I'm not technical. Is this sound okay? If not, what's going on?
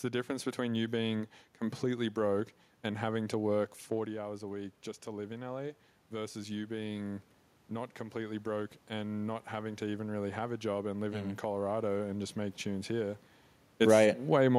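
No. Just after "and having to work", at about 4.0 seconds, the voice drops as the talker moves away from the microphone. From then until about 11.5 seconds, the voice and the room's background noise slowly swell louder together. This is automatic gain rising. The recording system noticed the input had become quieter and turned its own volume up gradually over several seconds to compensate, lifting the room noise along with the voice.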